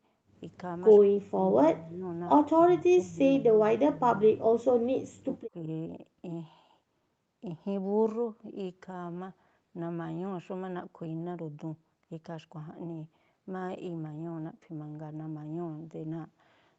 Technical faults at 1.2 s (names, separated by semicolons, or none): speech suppressed in double talk